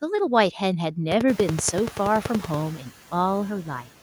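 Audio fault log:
1.12–2.55 s: train of clicks. Regular ticking at 10.5 clicks per second, about fifteen near-identical pulses peaking roughly 15 dB above the speech and audible over the room noise that rises near 1.5 s. The likely cause is interference or a faulty connection or power supply injecting repeated pulses.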